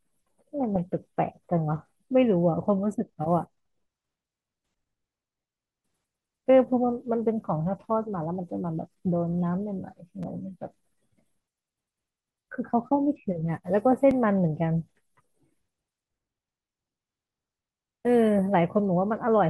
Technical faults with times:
10.23 repeated buffer
14.11 repeated buffer

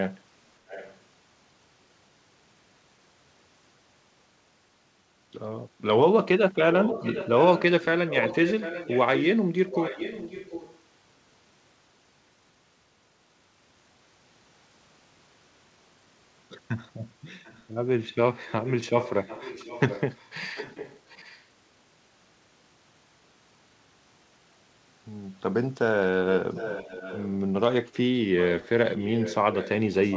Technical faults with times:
0.68-0.98 echo leak
6.72-10.79 echo leak
17.28-17.64 echo leak
18.48-21.44 echo leak
26.54-27.35 echo leak
28.41-30.17 echo leak

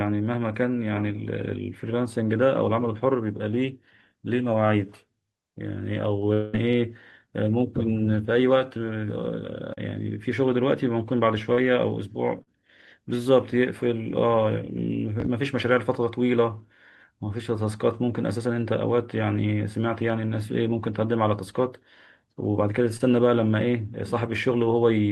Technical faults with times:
6.33-6.55 long network dropout
9.73-9.79 short concealed packet loss
11.53-11.59 short concealed packet loss
12.43-12.49 short concealed packet loss
15.20-15.28 loud pop
22.97-23.01 short concealed packet loss

